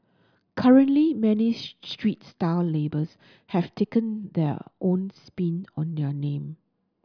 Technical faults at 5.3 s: none

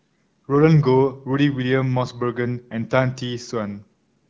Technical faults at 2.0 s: none

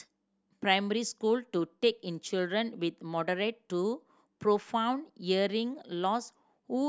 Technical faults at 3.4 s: none

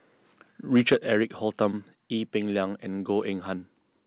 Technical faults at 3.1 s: none

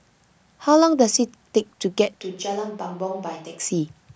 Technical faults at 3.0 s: switch to a distant microphone

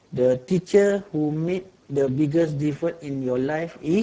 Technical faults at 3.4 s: Speex codec

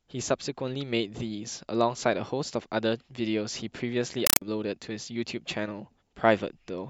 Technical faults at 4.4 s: compressed stream played as audio

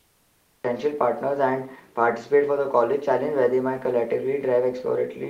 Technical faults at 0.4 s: cut-off start

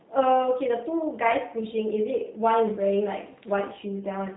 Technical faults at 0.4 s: G.729 codec

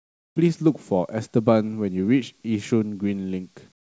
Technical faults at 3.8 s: comfort noise in place of the background

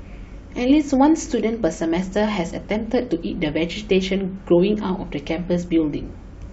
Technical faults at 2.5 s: overlap between stream segments

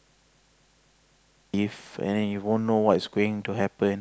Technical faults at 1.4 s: system hang loop

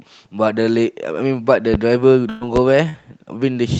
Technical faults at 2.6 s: loud pop

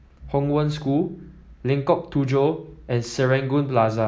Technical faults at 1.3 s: none

